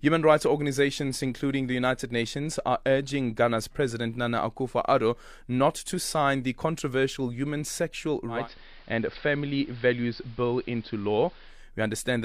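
A hybrid receiver in this speech lost its digital signal and blended to analogue AM from 8.27 to 11.67 s: a 217 ms cross-fade brings in hiss and about 1 dB lower level.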